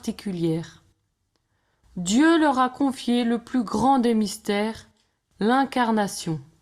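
No technical faults can be heard anywhere in the speech recording. Nothing in it calls for a timestamp or a repair.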